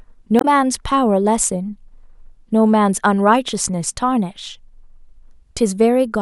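Right near the start, from 0.38 to 0.45 s, there's a brief garbled blip where the compressed stream has damaged data. The decoder hits bytes it can't make sense of, loses its footing, and has to hunt for the next valid frame before clean speech resumes.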